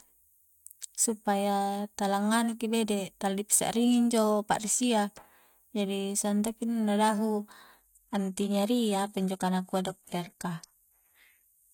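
At 7.77 s the adaptive stream switches to a lower bitrate and stays there, as the player falls back to a cheaper version of the stream. The speech changes abruptly, with no gap, and loses everything above 14.9 kHz, which fits a 20 kbit/s HE-AAC stream.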